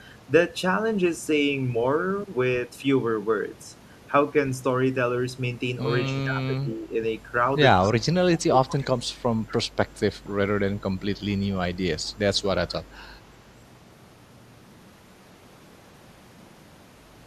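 From 6.14 to 6.93 s the speech dips by roughly 15 dB, and from 7.8 to 9.02 s it drops again, by roughly 20 dB at its deepest, sounding ducked and partly cut away. This is speech suppressed in double talk, likely caused by an echo canceller that could not separate the near talker from loudspeaker echo while both sides spoke, so it attenuated everything for around a second at a time.

Overlapping that second dip, an echo leak appears at 7.83 to 7.92 s and 8.74 to 8.85 s, with a final scrap at 10.27 to 10.31 s. Each is a short, delayed copy of the speech trailing by 234 ms, about 15, 20 and 30 dB below the direct voice respectively. The likely cause is residual loudspeaker pickup that the far end's echo canceller failed to remove and sent back down the line.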